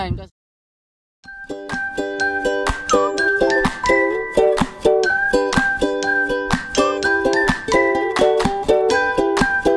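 Nothing here goes wrong at any point, so there's nothing to flag.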